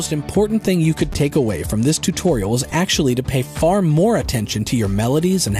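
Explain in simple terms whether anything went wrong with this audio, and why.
Between 0.92 and 2.30 s, a busy wireless link made the phone send less data. This is a Bluetooth SBC bit pool drop: the highest frequencies are left out and the rest are stored roughly, so the sound turns dull and gritty until the link recovers.

At 1.13 s and 2.71 s, fresh audio arrived late, so the device replayed its last tiny 5 ms chunk, three times and then twice. This repeated buffer is heard as a brief click or buzz, with almost nothing lost.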